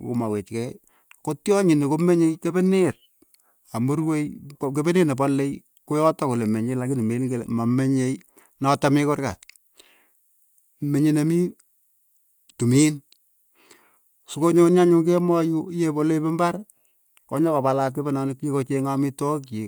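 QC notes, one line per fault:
No technical faults are present in this speech recording.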